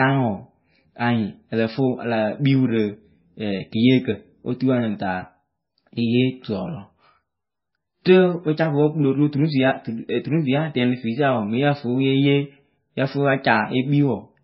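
Throughout the speech, heavy MP3 compression likely strips everything above 5.6 kHz and leaves swirly, watery sibilants, a pattern pointing to a very low bitrate near 17 kbps, unlike plain low-pass filtering.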